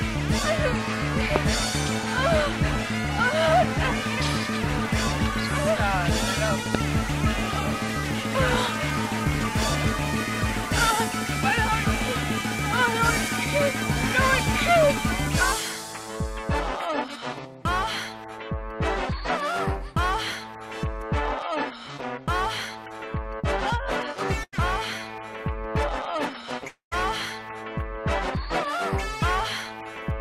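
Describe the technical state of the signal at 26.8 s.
A long network dropout covers 26.68 to 26.93 s, so 26.8 s falls inside it. About 240 ms of audio is missing there. The gap is filled by a fading buzz carried over from the last sound before it, which thins out into about 120 ms of near-silence before the signal resumes without the lost part. The likely cause is audio that never reached the receiver, which stretched the final fragment until it ran out.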